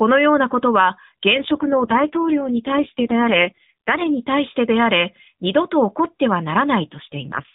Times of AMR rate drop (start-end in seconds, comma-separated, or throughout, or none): 1.34-4.20, 6.92-7.54